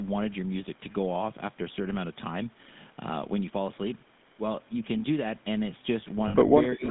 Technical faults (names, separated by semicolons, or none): GSM full-rate codec; lost GSM frames; speech suppressed in double talk; echo leak